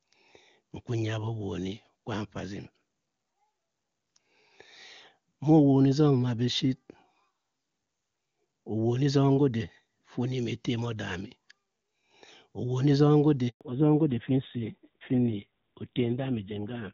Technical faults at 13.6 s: handover gap; fallback to narrowband

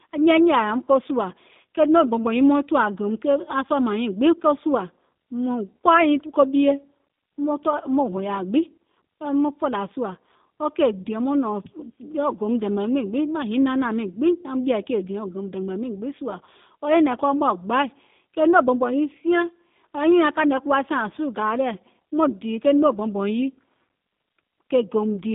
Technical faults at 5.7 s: G.729 codec

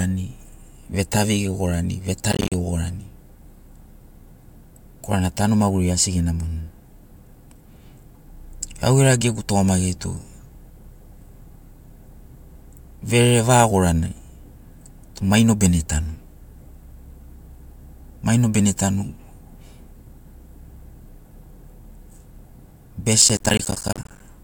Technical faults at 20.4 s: none

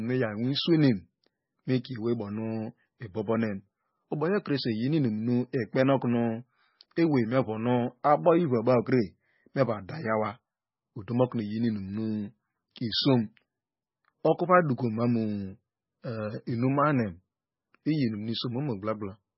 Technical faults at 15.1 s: MP3 compression

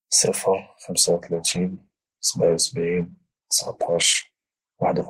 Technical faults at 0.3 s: none

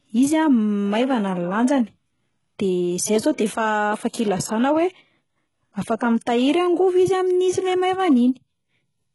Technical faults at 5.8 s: HE-AAC compression

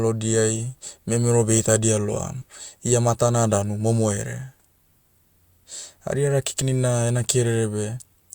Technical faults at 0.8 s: none

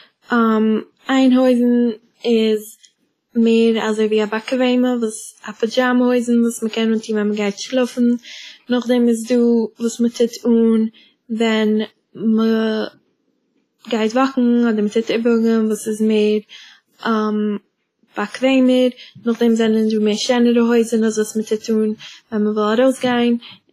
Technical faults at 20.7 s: WMA compression

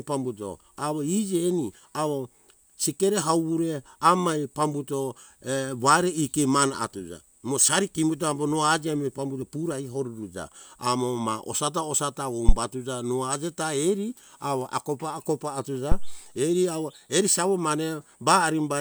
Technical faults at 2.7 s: none

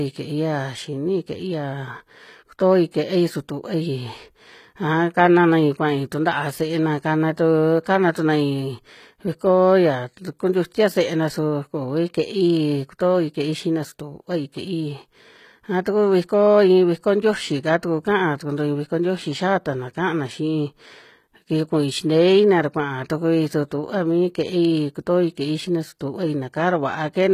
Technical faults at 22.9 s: HE-AAC compression

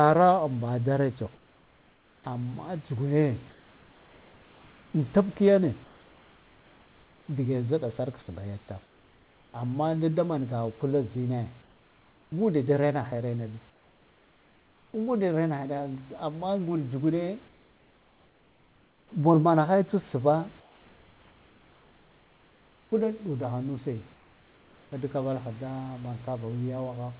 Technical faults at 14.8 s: comfort noise in place of the background

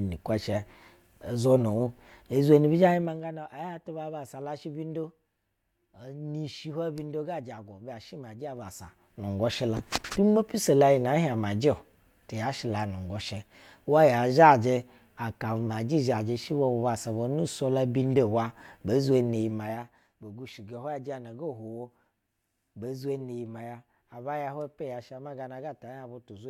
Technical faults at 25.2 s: none

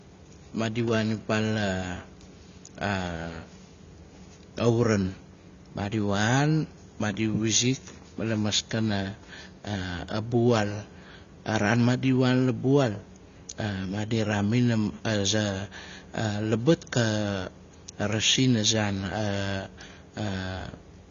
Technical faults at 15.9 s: AAC compression

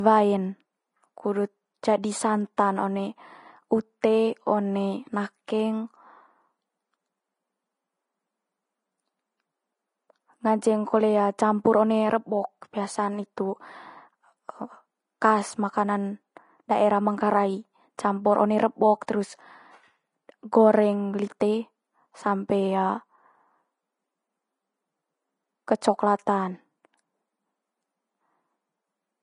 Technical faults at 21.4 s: Vorbis compression; pre-echo

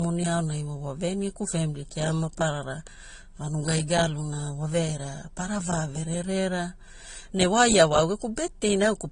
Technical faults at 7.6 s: transcoding between lossy codecs

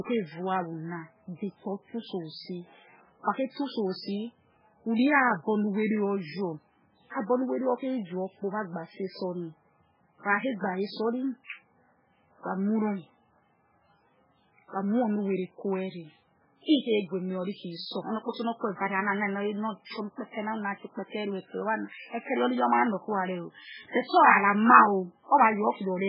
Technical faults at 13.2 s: MP3 compression

